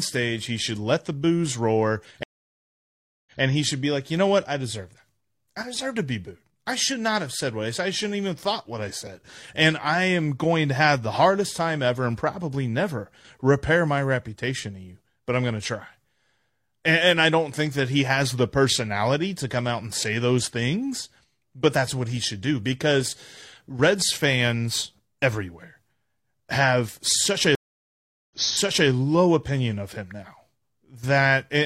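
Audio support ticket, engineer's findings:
Stream reconnect at 2.23–3.40 s and 27.55–28.89 s. Connection dropped, server resent a burst, and a fresh decoder restarted mid-stream. Silence of 1.03 s, then 0.74 s. Audio resumes 0.14 s, then 0.6 s, earlier, so sound repeats.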